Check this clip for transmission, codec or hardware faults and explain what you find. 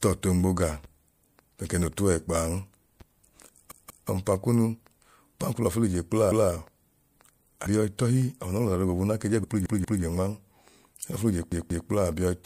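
Two kinds of fault appear in this speech clip: compressed frames skipped, three times, and a repeated buffer, four times.

Compressed frames skipped occurs at 3.23 s, 7.65 s and 9.43 s. The decoder drops whole frames of about 26.1 ms, so about 150 ms vanishes at the first point and about 70 ms at the others.

The repeated buffer occurs from 3.72 to 4.09 s, 6.32 to 6.50 s, 9.66 to 10.03 s and 11.52 to 11.89 s. When fresh audio arrived late, the last 185.76 ms block was replayed twice, or once at 6.32 s, which fits an 8192-sample buffer. Each repeat is audible as a stutter with hard joins, and no audio is lost.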